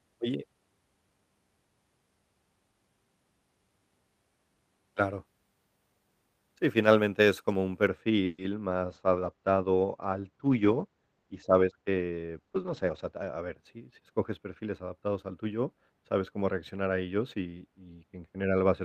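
Wrongly applied de-emphasis begins at 7.87 s and lasts to the end of the clip. A treble-cutting filter meant to reverse a pre-emphasis boost has been applied where no boost existed, or applied a second time. The response slopes smoothly downward, so that 10 kHz sits about 13 dB below 1 kHz. From this point the speech sounds dull and muffled, with its sibilance and crispness softened throughout the remaining seconds.

A call audio freeze follows at 8.25 s and runs to 8.40 s. The last sound is stretched into a short buzz or hiss that fades, about 130 ms long, and then the speech resumes exactly where it stopped. Nothing is lost, but the timing is pushed back by the same 130 ms. The likely cause is packets held up in transit, which emptied the jitter buffer and left the receiver to fill the gap on its own.

A call bitrate drop runs from 8.88 s to 13.62 s. The call's bandwidth estimate fell, and the Opus encoder was told to go from 40 kbps down to 12 kbps, staying at that low rate for roughly 4.5 s. 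With so few bits it codes the speech coarsely and pulls its upper cut-off down to 8 kHz. The result sounds rough and watery, and this section is even more muffled than the filtered audio around it.

A jitter buffer speed-up overlaps that section, from 12.56 s to 14.01 s. The buffer held more audio than its target. To shed the excess latency, the receiver repeatedly removed short pitch-period-sized pieces, about a tenth of a second in total. The speech plays roughly 8% faster while keeping its pitch, so this stretch sounds slightly hurried.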